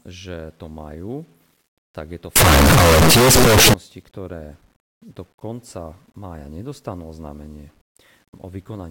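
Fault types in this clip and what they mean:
Signed and unsigned mixed up: From 2.36 s to 3.74 s, just after "tak je to", the speech turns into a very loud, harsh distortion. Quiet moments in that stretch are as loud as the rest. Each time the waveform crosses zero, it seems to leap across the full range. This likely comes from 8-bit samples being read with the wrong sign convention, flipping the top bit.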